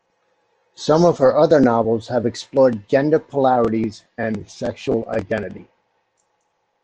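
Speech, with a drift correction step from 1.42 to 3.57 s: speed and pitch rise together by 5.78% and 97.3 cents, nearly a semitone, then snap back. That is likely a clock-matching resampler adjusting its buffer. Unlike tape wow, the shift is steady with abrupt edges.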